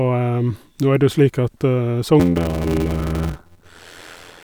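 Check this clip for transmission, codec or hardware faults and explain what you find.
There's one fault in this speech: a block size mismatch (padded) from 2.19 s to the end at 4.44 s. One stage writes blocks shorter than the next reads, which fits 320 written into 512-sample reads, with zeros filling each remainder. That adds an 86.1 Hz buzz and slows delivery to 0.625 times speed, with pitch held roughly normal.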